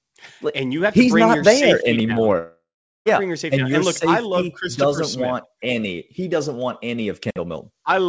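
A likely long network dropout in this speech clip loses about 0.68 s of audio from 2.38 to 3.08 s. The receiver stretches the last sound into a fading buzz or hiss, then leaves 0.42 s of silence, all within the call's G.722 band, which stops at 8 kHz.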